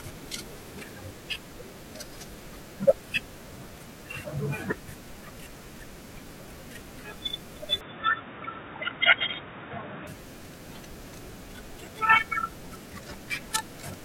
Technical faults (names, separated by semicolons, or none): input switched to a poorer device